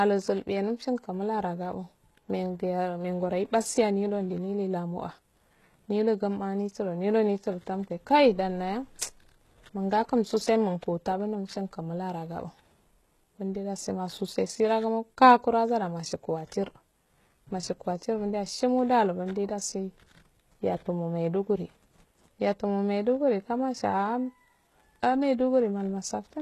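All the way through, the speech carries plainly audible HE-AAC compression, likely at a low bitrate around 16 kbps. Nothing is left above about 12.3 kHz, and the treble below that is rebuilt from copied lower bands, so the s sounds come across gritty and metallic.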